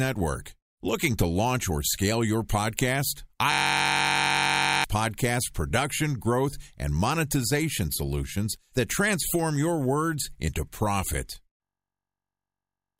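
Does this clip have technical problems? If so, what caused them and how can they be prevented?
Yes, there's a system hang loop at 3.52–4.84 s and 11.63–12.99 s. A frozen driver let the hardware replay one 21.33 ms buffer, which fits 1024 samples, causing a 46.9 Hz buzz. The waveform shows identical repeating blocks, and the spectrogram shows evenly spaced harmonic lines. Prevent it with stable drivers, a watchdog that mutes stalled output, and enough CPU headroom.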